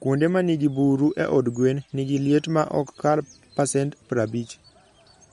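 Throughout the speech, the audio was likely squeezed by MP3 compression at a low bitrate, around 48 kbps. Short of bits, the encoder drops everything above 11.2 kHz and discards weak frequency detail, leaving a dull top end and a plainly audible watery, swirling texture.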